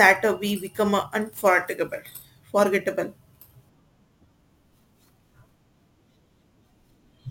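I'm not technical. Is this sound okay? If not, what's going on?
No. From start to end the speech carries a gritty fizz from crude rate conversion. Samples were repeated rather than properly recalculated, consistent with a change from 44.1 kHz to 48 kHz. This adds stray tones unrelated to the speech, loudest on strong, bright sounds.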